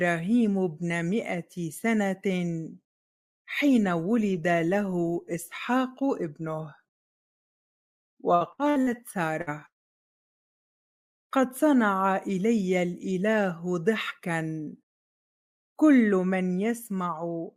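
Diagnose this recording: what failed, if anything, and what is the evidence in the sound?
Repeated packet loss (robotic sound) at the network stage affects two stretches, 8.35 to 9.01 s and 9.42 to 10.52 s. Packets arrived late or not at all, and the receiver filled each hole by extending the last good sound. About a third of each span is patched. The first has five gaps up to 58 ms and the second six gaps up to 175 ms, which gives a choppy texture with pieces missing. On a spectrogram the fills show as frozen, smeared bands. In the waveform they appear as repeated cycles.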